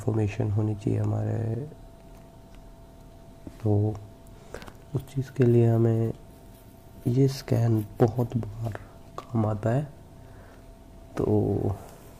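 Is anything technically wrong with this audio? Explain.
No, no technical faults present.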